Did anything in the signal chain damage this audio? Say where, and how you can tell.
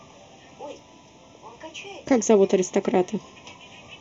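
Yes, two stages left marks on this speech.

The first is channel delay (comb filtering), present for the whole clip. It comes from the point where two channels were summed to mono with one of them arriving late by roughly a third of a millisecond. The shared speech partly cancels itself, so the clip sounds hollow and phasey. A spectrogram shows fixed dark horizontal bands that don't move with the voice. The first notch sits near 1.5 kHz, and the others are spaced evenly above it, roughly every 3 kHz.

The second is an overlap between stream segments, at a segment boundary during streaming or playback. From 0.79 to 0.84 s, about 43 ms of sound is discarded because two segments' time stamps overlapped, and the player trimmed audio that was not actually duplicated. You hear a tiny skip. On the waveform it appears as an abrupt step where the cycles don't join, and on the spectrogram as a thin vertical broadband line.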